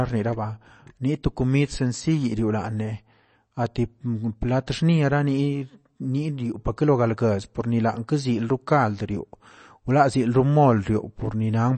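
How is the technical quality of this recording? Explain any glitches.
Quality's held back by one problem that runs the whole way through. It's likely MP3 compression: the speech is cut off above 8.3 kHz, and the plainly audible watery, swirly texture suggests a starved bitrate of around 32 kbps.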